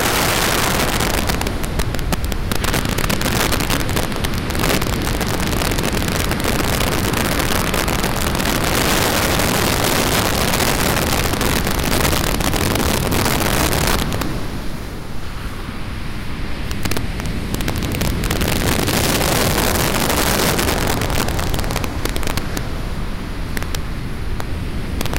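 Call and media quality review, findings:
Integer overflow throughout: harsh cracks on every loud peak, far sharper than clipping. Gain stage pushing roughly 10 dB too hot, sum wraps instead of saturating, so peaks flip to the opposite sign. Around 7% of samples affected. Probably fixed-point mixer or gain without clamp.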